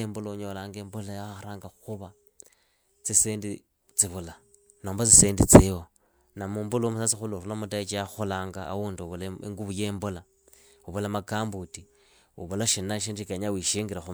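Listening through this speech recording, nothing stood out as a technical problem at any point.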